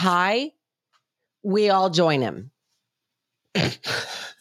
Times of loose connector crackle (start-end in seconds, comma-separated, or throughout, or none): none